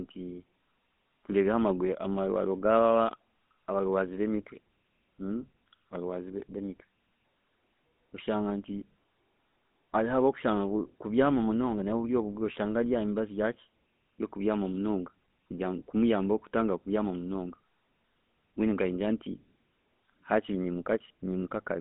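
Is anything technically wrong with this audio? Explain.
Yes, the whole clip has been through a GSM full-rate codec. The speech sits in a narrow band, roughly 200 Hz to 3.6 kHz, so there's no low body and no air on top. The codec models the vocal tract and drives it with a sparse, regularly spaced pulse excitation rather than the real signal, and that shortcut is plainly audible here as a buzzy, gravelly roughness on the speech. It fits the 13 kbps full-rate mode.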